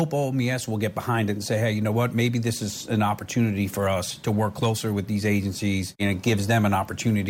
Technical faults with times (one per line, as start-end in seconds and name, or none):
none